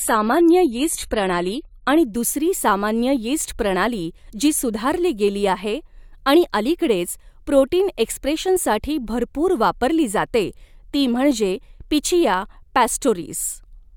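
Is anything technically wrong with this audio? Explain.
Yes. For the first 2.0 s the speech sounds dull and smeared, with nothing above 14.1 kHz and heavier codec artefacts. Then it sharpens abruptly, with no gap, just before "दुसरी सामान्य यीस्ट प्रणाली". This is an adaptive stream starting at a low bitrate. The player opened on a lean version, which fits 32 kbit/s AAC, then stepped up to one nearer 96 kbit/s.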